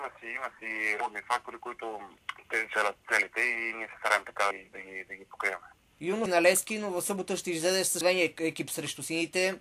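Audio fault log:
2.76 s, 4.51 s, 8.01 s: audio missing between chunks. Roughly a third of a second is lost each time and the sides are butted together without silence. That abrupt jump, not a silent gap, sets it apart from a dropout. The likely cause is a recorder working in 2-second chunks.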